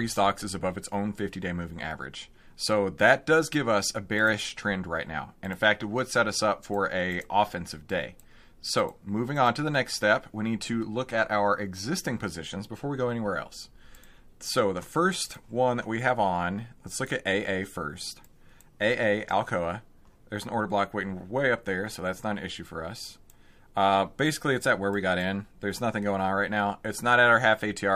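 No technical faults can be heard in this recording.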